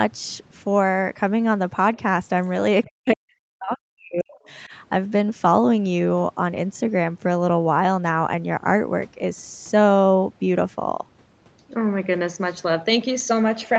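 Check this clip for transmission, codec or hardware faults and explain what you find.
Two faults stand out in this speech, both around an echo canceller on the talker's side. The audio stops near 8 kHz, consistent with a wideband Opus call path.

Other side's voice leaking through, 2.84 to 2.88 s. A brief scrap of a second voice appears, about 25 dB below the main speech. It is likely loudspeaker echo the canceller failed to remove. It sounds faint and clipped short.

Speech suppressed in double talk, 2.86 to 4.49 s and again at 4.67 to 4.73 s. The talker's level sinks sharply, by roughly 40 dB at worst in the first stretch and about 10 dB in the second. The suppressor likely treated the speech as echo and turned it down, so it fades.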